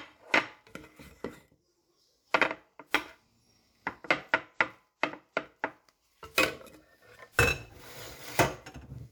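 Everyday sound recording; no technical faults can be heard.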